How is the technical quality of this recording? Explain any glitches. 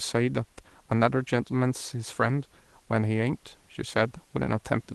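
No glitches can be heard.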